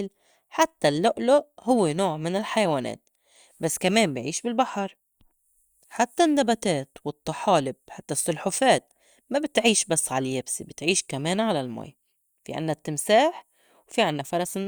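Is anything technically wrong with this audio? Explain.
No, nothing in this speech recording stood out as technically wrong on listening.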